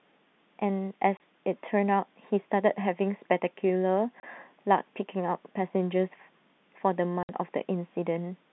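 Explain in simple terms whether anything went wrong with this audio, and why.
Packet loss filled with silence: somewhere along the line, chunks of the audio stream never arrived, and the receiver played silence in their place. In this speech you hear it as sudden holes with hard edges: about 30 ms gone at 1.17 s and at 4.20 s, and a longer 60 ms gap at 7.23 s. The double-length gap suggests two chunks were lost in a row, which fits 30 ms packets. All of this comes through the narrow, phone-line sound of standard G.711 telephone coding.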